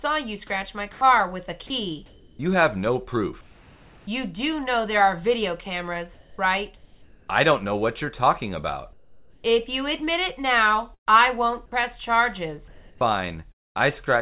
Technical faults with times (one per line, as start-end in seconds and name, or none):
0.92-1.01 comfort noise in place of the background
2.06-2.39 comfort noise in place of the background
3.41-4.07 comfort noise in place of the background
6.14-7.28 comfort noise in place of the background
8.93-9.44 comfort noise in place of the background
10.94-11.09 burst of packet loss
12.68-13.82 comfort noise in place of the background
13.52-13.78 long network dropout